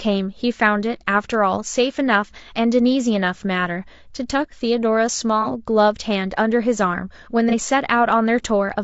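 Across the whole recording the speech sounds rough and grainy, with a hiss that sits between the harmonics and a top band that sounds dulled and synthetic rather than airy. This is low-delay AAC compression, likely AAC-ELD, the codec used in video calls. Its short frames describe pitch harmonics coarsely and spend bits quickly, so at a rate that fits roughly 32 kbps the gaps fill with noise and the highs are rebuilt approximately.

Twice the sound briefly blurs into a noisy, phasey smear: from 5.42 to 5.47 s and again from 7.49 to 7.54 s. Each is AAC frame loss with concealment. A compressed frame, about 30 ms in each case, which fits a single frame, never arrived. The decoder filled the hole by reusing the last good spectrum with scrambled phase. The dropouts are short, so the gap is patched over rather than fading to silence.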